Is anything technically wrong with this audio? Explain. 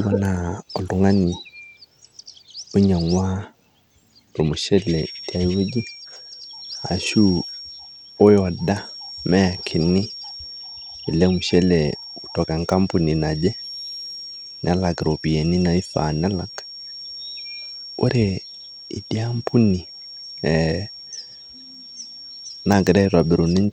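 Yes, there are two faults. Throughout the clip, the speech carries plainly audible codec damage, likely Bluetooth SBC compression at a low bitrate, consistent with roughly 96 kbps. The coarse sub-band bit allocation starves the upper bands, so the treble thins and flickers while a gritty, aliased noise clings to the speech.

From 4.75 s to the end, a thin, steady tone near 5.5 kHz sits about 20 dB beneath the speech, swelling and fading slowly in level. This is a feedback whistle, likely from a loudspeaker-to-microphone loop held just at the edge of feedback, so one frequency rings on without running away.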